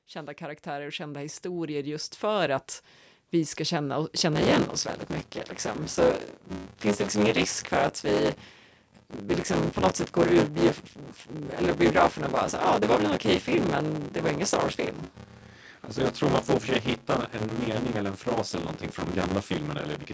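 Automatic gain rising at the start of this speech recording: the gain control judged the input too quiet and turned itself up by about 11 dB between 0.05 and 2.73 s, so voice and background swell together until the level settles just before "vi ska känna".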